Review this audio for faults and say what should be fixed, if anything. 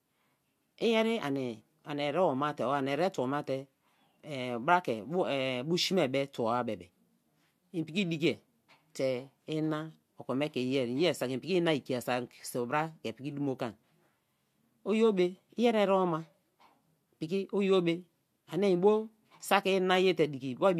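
No faults turn up in this audio, so nothing needs to be fixed.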